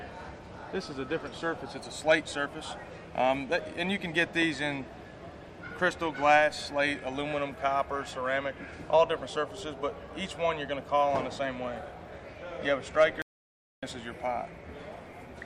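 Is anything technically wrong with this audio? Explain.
Yes. At 13.22 s the audio drops out to silence for about 0.61 s, returning at 13.83 s. The sound cuts off mid-flow and the gap holds no room tone. The likely cause is the input being lost, from a disconnected device, a failed link or a stray mute, while recording continued, so whatever occurred then is missing.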